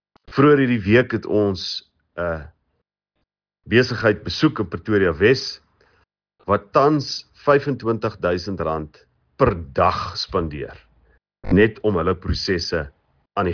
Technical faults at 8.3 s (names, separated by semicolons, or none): none